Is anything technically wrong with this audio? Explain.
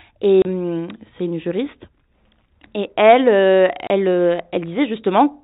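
Yes. Packet loss filled with silence occurs at 0.42 to 0.45 s, just before "hum c'est une juriste", and at 3.87 to 3.90 s, right after "et elle euh". Each 30 ms gap fits one lost packet. The gap is replaced by dead silence with hard edges, not the smeared or repeated sound that concealment would leave. The 4 kHz band limit comes from the G.711 telephone coding.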